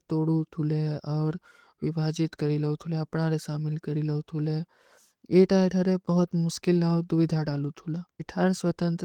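No technical faults can be heard in the speech. There is nothing to place in time order, since no moment stands out as a point where something goes wrong.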